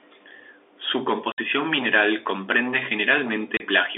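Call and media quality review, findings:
Hard-edged silent holes at 1.32–1.38 s, before "mineral comprende", and 3.57–3.6 s: packet loss filled with silence on the G.711 path; gap lengths fit 30 ms packets.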